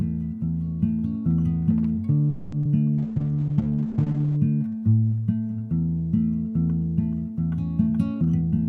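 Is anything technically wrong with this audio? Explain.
Yes, there are four distinct transport and codec faults in this audio.

From 2.29 to 2.54 s the sound stalls for about 230 ms, the last sound stretched into a fading buzz or hiss, then resumes intact. This is a call audio freeze, likely from delayed packets draining the jitter buffer.

At 2.62 to 2.71 s there is short concealed packet loss. Roughly 20 ms never arrived, and the receiver bridged it by extrapolating the preceding sound, leaving a brief smear.

From 2.98 to 4.44 s a call bitrate drop makes the audio coarse and muffled, with the top end cut off at 8 kHz. The bitrate falls from roughly 64 kbps to 10 kbps, and the lowest level lasts about 1.4 s.

From 7.90 to 8.58 s a jitter buffer speed-up plays the audio at 115% speed with unchanged pitch. Repeatedly removing pitch-period slices trims about a tenth of a second of excess delay, so the passage sounds hurried.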